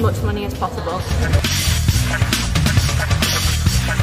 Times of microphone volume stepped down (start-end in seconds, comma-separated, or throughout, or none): none